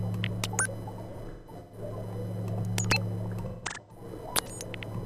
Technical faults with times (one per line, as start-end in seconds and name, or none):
1.12-1.78 AAC frame loss with concealment
3.46-4.04 AAC frame loss with concealment